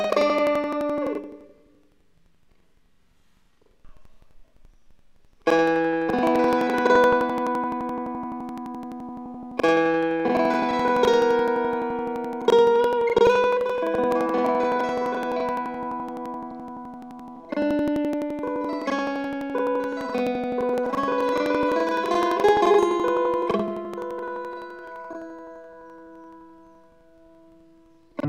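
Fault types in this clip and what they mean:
planar audio read as interleaved: throughout, 85.33 ms blocks each play twice at double speed, left then right, giving an octave-high sound with 11.7 Hz flutter.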